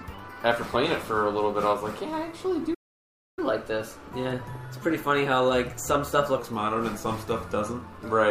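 At 2.74 s the sound cuts off abruptly and silence holds until 3.39 s, a playback stall lasting about 0.63 s. The player was likely starved of data or blocked. On a waveform this is a flat line; a spectrogram shows a clean vertical blank band.

From 3.39 to 6.39 s comes catch-up at higher speed: the backlog is resampled to play 1.1 times faster, raising pitch by roughly one and a half semitones. A spectrogram shows every component shifted upward, and waveform features sit closer together until normal speed resumes.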